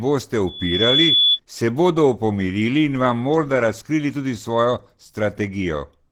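Throughout the speech there is plainly audible codec damage: a hoarse, muffled texture with grainy detail, though content still reaches the top of the audible band. This is likely Opus compression in its hybrid speech mode, consistent with a low bitrate around 16 kbps.

From 0.46 s to 1.39 s a loudspeaker feedback squeal intrudes. The microphone re-captures its own loudspeaker, and the loop gain exceeds one at 3.4 kHz. That single tone swells over roughly 0.4 s and sits a few decibels above the speech.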